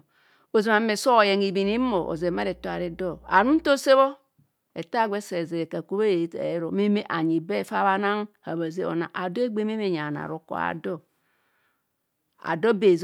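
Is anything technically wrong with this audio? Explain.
Yes. From 1.66 to 3.70 s there is mains hum: a steady 60 Hz tone, well below the speech, coupled in from the power line. Unlike broadband rumble, it holds one fixed pitch.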